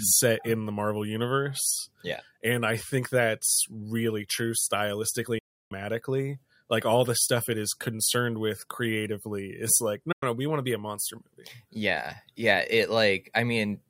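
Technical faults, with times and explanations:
5.38–5.72 s and 10.12–10.23 s, digital broadcast dropout: the receiver lost the signal or rejected corrupted frames and muted until valid ones resumed. The speech fades out within 8 ms into silence lasting 320 ms, then 96 ms between "with creatively is like" and "no we want to". This fits about ten and three lost frames, and what was sent during them is missing.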